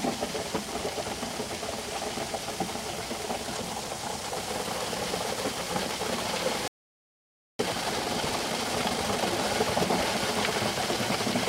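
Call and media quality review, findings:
Playback stall, 6.68 to 7.59 s: output drops to silence for about 0.91 s mid-flow, then resumes. Likely player buffer underrun or blocked audio thread, not a dropout in the source.

Time-compressed catch-up, 7.59 to 9.41 s: audio hurried to 1.5x with pitch unchanged. Backlog trimmed by cross-fading small segments, unlike resampling, which raises pitch.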